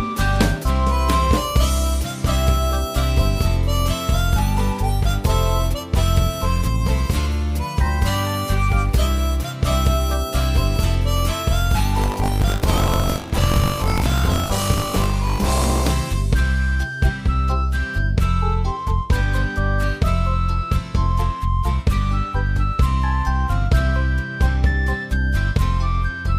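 From 11.96 s to 15.90 s there is buffer tearing: the write and read positions in the ring buffer have slipped, so a small slice of each period, roughly a sixth, replays audio from about 70 ms earlier. The hard joins produce a robotic buzz at 50 Hz, matching 20 ms periods.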